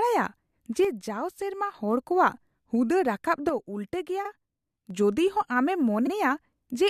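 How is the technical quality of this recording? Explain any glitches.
The recording has two kinds of fault: two level drops and two short stutters.

One channel drops out from 0.85 to 1.74 s, ending just before "ᱦᱚᱲ ᱠᱚᱣᱟᱜ ᱦᱩᱫᱟᱹ ᱨᱟᱠᱟᱵ". It happens again from 3.49 to 4.90 s, between "ᱦᱚᱲ ᱠᱚᱣᱟᱜ ᱦᱩᱫᱟᱹ ᱨᱟᱠᱟᱵ" and "ᱡᱚᱫᱤᱦᱚᱸ ᱟᱢᱮᱢ". The speech suddenly falls by about 6 dB, then jumps back. The likely cause is one stereo side going silent before the mix to mono.

Repeated frames occur at 4.24 to 4.29 s and at 6.06 to 6.10 s, just after "ᱡᱚᱫᱤᱦᱚᱸ ᱟᱢᱮᱢ". Each time, a 42.7 ms slice of compressed audio plays twice. This is heard as a quick stutter. Each repeat adds 42.7 ms to the clip.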